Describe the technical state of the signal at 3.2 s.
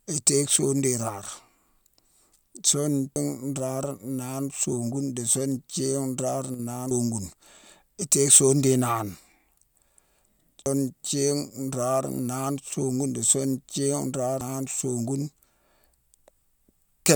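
At 3.16 s there is audio missing between chunks: the recorder likely dropped a piece while switching between its 4-second chunks. About a third of a second of speech is skipped, and the two sides butt together with no gap just before "nraare naane".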